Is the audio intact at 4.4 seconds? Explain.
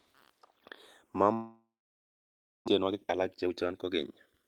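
No. At 4.4 seconds the receiver's jitter buffer is near the end of a jitter buffer speed-up that runs from 2.79 to 4.43 s. The buffer had filled past its target, so the receiver trimmed short slices of one or a few pitch periods again and again, removing about half a second of audio in total. Playback runs at about 131% of normal speed with the pitch unchanged, so the speech here sounds rushed and compressed.

The two channels are also drifting apart throughout the clip, including at this moment. They were captured on devices whose clocks disagree by roughly 150 parts per million, so the delay between them keeps growing, reaching a bit under a millisecond by the end. When the channels are summed to mono, that shifting offset moves comb-filter notches slowly across the spectrum, which is heard as a gradual flanging sweep over the sound.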